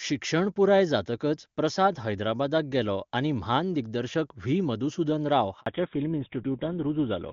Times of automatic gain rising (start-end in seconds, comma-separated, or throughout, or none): none